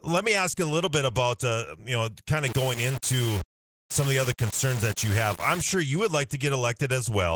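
From start to finish the speech carries Opus voice compression, and the damage is plainly audible. The codec is running in hybrid mode, with the linear-prediction layer coding the lower band and a transform layer handling the range above 8 kHz. The band stays full, reaching up to about 20.1 kHz, but the excitation is coded coarsely. The result is a hoarse, slightly robotic edge, which fits a bitrate around 16 kbps.

From 2.47 s to 5.61 s a grainy distortion rides on the speech and changes with it, turning quiet stretches gritty and making the softest parts sputter. This is low bit depth without dither. The signal was likely rounded to very few levels, which fits about 4 bits, so the error tracks the waveform instead of forming steady hiss. The grain sits only around 15 dB below the speech.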